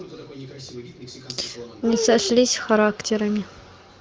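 No technical faults can be heard in this speech. It passes through the AMR wideband (HD Voice) codec, and the clear, wideband sound points to one of its higher rates, around 23 kbit/s, with at most faint traces of coding.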